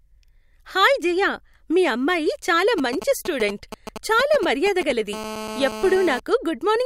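From 2.78 to 4.92 s, just after "జయ మీ అమ్మాయి చాలా", GSM signalling bursts break in: a nearby 2G phone sends brief groups of radio pulses that the audio circuitry rectifies, giving a galloping dit-dit-dit of short 217 Hz buzzes, roughly 10 dB below the speech. A spectrogram shows clustered vertical stripes; the waveform shows spiky packets.

From 5.13 to 6.20 s, GSM phone buzz takes over as the phone holds a call, pulsing steadily 217 times a second. It is a continuous, harsh rasp about 11 dB below the speech, drawn on a spectrogram as a dense ladder of harmonics spaced 217 Hz apart, and in the waveform as a regular square-edged pulse train.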